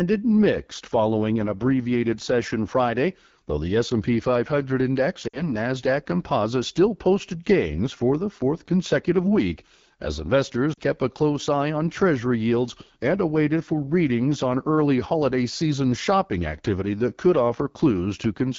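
Throughout the speech, the AMR wideband (HD Voice) codec is working near the bottom of its range. The rasp and roughness fit the 8.85 kbit/s mode. The pulse-driven model of the vocal tract has too few bits to shape each pitch period, so the speech grinds. The band still reaches about 7 kHz, with the top part filled by shaped noise. That extended top end is what separates it from a narrowband phone codec, which would sound muffled rather than gritty.

At 5.27 s the first stretch of lost AMR speech frames begins, lasting until 5.50 s. About 60 ms of audio is missing, which fits three dropped 20 ms frames. The decoder repeats the last good pitch and vocal tract settings with falling gain, so the sound smears and quickly sinks before the speech returns weak or rough. The second loss, at 10.73 to 10.79 s, covers about 40 ms, which fits two frames, and sinks toward near silence. What marks these as concealed frame losses rather than clean dropouts or clicks is the smeared sound that fades away, instead of a hard gap.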